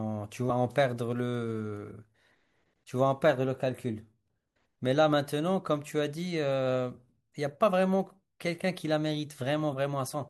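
At 0.49 s and again from 10.13 to 10.15 s, damaged data in a compressed stream makes the decoder misread corrupted frames and lose sync, producing a brief disruption in the speech.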